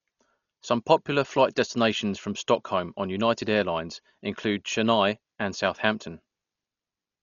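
Throughout, the speech is dull and rough, with nothing above 6.9 kHz. Likely heavy Dolby Digital compression, which fits a bitrate near 40 kbps.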